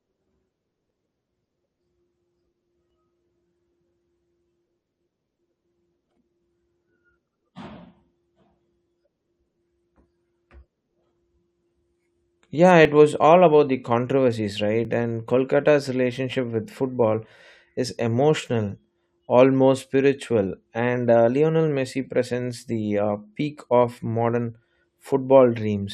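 At 0.90, 2.90, 6.89, 8.87, 12.85 and 14.85 s the speech skips briefly, a sign of overlap between stream segments. Boundaries fall every 2.0 s; where timestamps overlap, the player discards a few milliseconds of real audio, so the waveform jumps.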